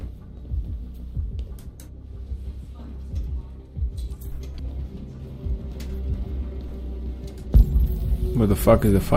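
At 4.59 to 4.62 s, a brief blip cuts through the sound. This is damaged data in a compressed stream. A short run of corrupted bytes leaves the decoder unable to read those frames. It loses sync and searches for the next valid header.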